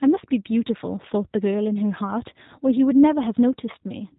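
From start to finish the speech sounds slightly rough and synthetic, with no air or sibilant sparkle above about 3.8 kHz. This is G.729 codec damage, and it is plainly audible. The codec rebuilds each 10 ms frame from a vocal tract filter, a pitch predictor and a handful of pulses, which fits an 8 kbit/s G.729A encode. The fine detail of the original waveform is discarded.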